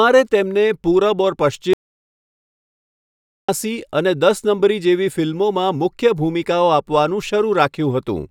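Speech clip with an audio dropout to silence from 1.73 to 3.49 s. About 1.75 s goes to silence, room tone included. Likely cause: the input was briefly lost.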